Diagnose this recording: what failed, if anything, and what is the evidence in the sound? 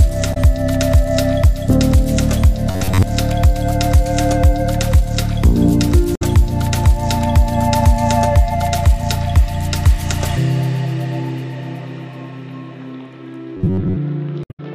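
Three brief disturbances occur at 0.30 to 0.37 s, 6.13 to 6.22 s and 14.41 to 14.60 s. This is damaged data in a compressed stream, a codec or storage-stage fault. Corrupted bytes make the decoder misread the affected frames, lose sync and skip forward to the next valid frame header. The disturbance is the misdecoded material, and any jump is the skipped span.

Two stretches, 2.71 to 3.03 s and 13.57 to 13.97 s, turn into a rigid, metallic buzz at 93.8 Hz that still loosely tracks the underlying sound. This is robotic sound from repeated short buffers, likely a driver or buffer-stage underrun. When fresh audio arrives too seldom, the last short chunk is looped to fill the gap, and most of the real audio is dropped. The 93.8 Hz pitch fits a buffer of about 10.7 ms.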